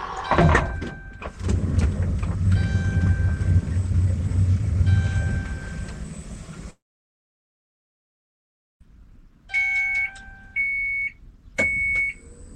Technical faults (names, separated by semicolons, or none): long network dropout